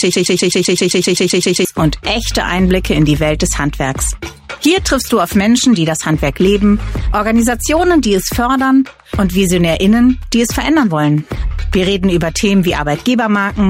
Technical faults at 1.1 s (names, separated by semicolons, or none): broken-record loop